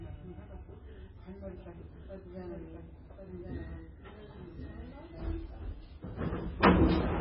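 A recording of everyday sounds that is dull and watery throughout, with nothing above 5.4 kHz, swirling textures and smeared attacks. This is likely heavy MP3 compression at a very low bitrate, around 16 kbps, which cuts the treble and drops weak detail frame to frame. From 1.43 to 5.07 s, a second full-band copy trails the sound by about a second, roughly 5 dB quieter and starting and stopping abruptly. This is a doubled audio track, likely the same audio mixed in twice out of step.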